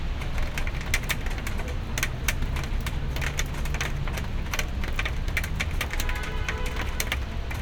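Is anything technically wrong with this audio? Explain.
No, nothing is technically wrong with this audio.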